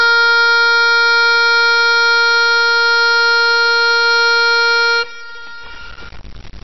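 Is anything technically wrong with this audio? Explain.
Yes, two faults run through the whole music clip.

Low bit depth without dither: grainy, rough distortion rides on the music the entire time, sitting only about 25 dB below the signal. It fits a level likely truncated to roughly 5 bits with no dither. The error tracks the waveform, so the grit swells and changes with the music and quiet passages turn gritty or sputter. Hiss that stays steady whatever the music does would point to dither or ordinary noise instead.

MP3 compression: the music sounds dull and watery, with nothing above 5.8 kHz and plainly audible swirling and smeared attacks. This likely comes from MP3 encoding at a rate around 24 kbps. Starved of bits, the encoder cuts the treble at a fixed point and drops weak frequency components that flicker on and off between frames. That flickering warble is what separates it from a simple low-pass filter, which dulls the top without the swirl.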